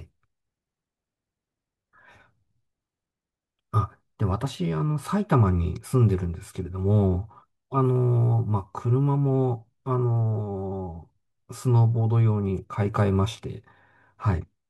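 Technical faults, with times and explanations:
No technical faults can be heard anywhere in the recording. Nothing in the speech calls for a time or an explanation.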